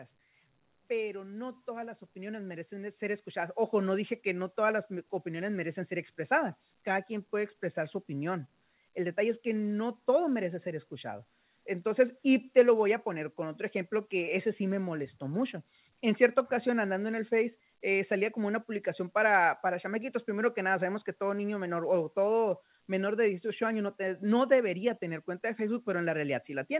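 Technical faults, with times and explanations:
1.07–13.68 s, automatic gain rising: the gain control judged the input too quiet and steadily raised its gain by about 14 dB, so the speech and background noise slowly swell together, all within a call band that carries nothing above 4 kHz.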